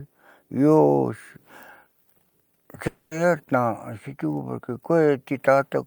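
At 2.87 s the speech breaks off until 3.13 s. The last sound is stretched into a fading buzz for about 240 ms, then a brief silence. Speech resumes with that stretch missing. This is likely a long network dropout, with audio never arriving.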